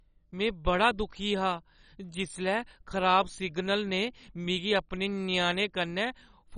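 Speech sounds heavily dull, gurgling and granular throughout, with nothing above 10.3 kHz: likely MP2 compression at a very low bitrate, dropping upper sub-bands and coarsely quantising the rest.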